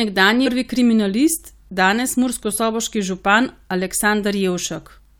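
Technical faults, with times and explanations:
0.45–0.47 s, damaged data in a compressed stream: a burst of about 20 ms of garbled sound cuts into the speech just before "kriminalist danes murskosoboški". The compressed data at this point is corrupt, so the decoder cannot read the affected frame correctly, loses its place in the stream and has to hunt for the next valid frame header. What comes out in the gap is a brief chirp or blip rather than the intended signal.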